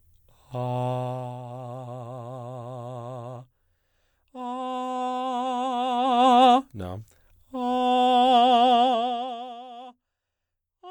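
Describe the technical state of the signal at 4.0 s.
At 4.0 s the music is intact, with no fault in the signal at that moment.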